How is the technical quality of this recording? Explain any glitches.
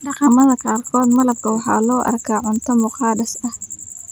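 The recording has one fault that runs through the whole clip. A filter restarted on every block puts a steady tick pattern under the speech. The ticks repeat at 25 Hz, which fits processing blocks 40 ms long. Each block enters the filter with its memory wiped, as if the signal before it were silence. The filter rings briefly as it catches up, leaving a small transient at every boundary. Together these form a low buzz. It grows louder with the speech and fades in quieter passages.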